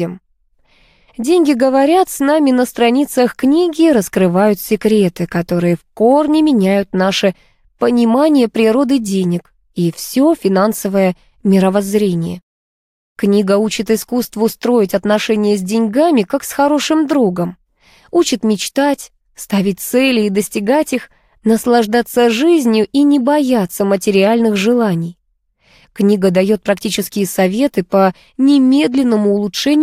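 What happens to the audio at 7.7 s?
Nothing goes wrong at 7.7 s; the audio runs through that moment intact, with no dropout, glitch or other fault.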